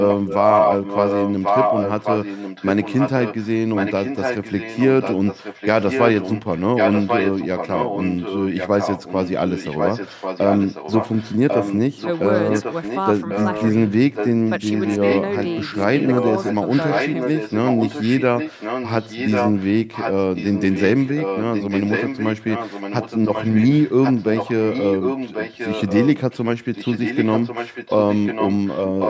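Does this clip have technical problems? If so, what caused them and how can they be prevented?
Yes. Throughout the speech, from 0.0 to 29.1 s, a second copy of the talking trails the original by about 1.09 s, only a little quieter than the direct sound, so the two overlap and blur each other. This is an echo leak, likely caused by a participant on loudspeaker whose echo canceller failed to subtract what its microphone picked up, so that sound returned down the line. Using headphones on that end, or fixing its echo cancellation, would prevent it.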